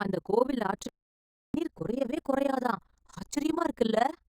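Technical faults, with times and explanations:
Throughout, overlap-add ripple: the level of the speech rises and falls around 30 times a second, with a swing of about 60 dB between the loudest and quietest points of each cycle. This fits audio that was split into windowed frames and joined back with an overlap whose windows don't add up to a steady gain. The level therefore pulses once per frame, and at this rate it comes across as a fast flutter or rough tremolo over the voice.
0.89 to 1.54 s, audio dropout to silence: just after "அந்த கோவில்", the speech cuts off and stays out for about 0.65 s before returning mid-flow. The gap is silent, with no room tone beneath it, and whatever was said during it is missing. The likely cause is that the input signal was lost for that stretch, through a disconnected device, a failed link or an accidental mute, while the recorder or encoder kept writing silence.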